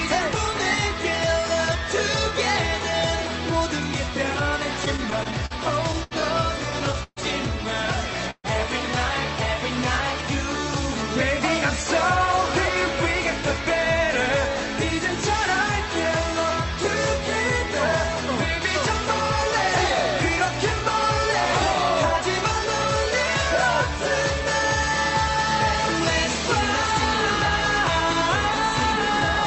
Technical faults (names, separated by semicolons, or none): repeated stalls (stutter); short stall from a late packet; call audio freeze